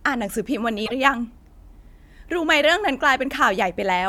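A short glitch cuts into the speech from 0.82 to 0.92 s. It is damaged data in the compressed stream: corrupted bytes make the decoder misread those frames and lose sync until it locks onto the next valid frame header.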